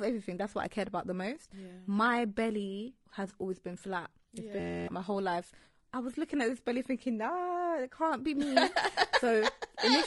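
Across the whole speech clip the voice sounds rough and grainy, with noise between harmonics, pointing to a low bitrate near 32 kbps and likely low-delay AAC compression (AAC-ELD). From 4.60 to 4.88 s a steady buzz at 86.1 Hz replaces the speech just before "my whole life I." That is a system hang loop: an 11.61 ms fragment, which fits a 512-sample buffer, repeats 24 times, and roughly a third of a second of audio is lost.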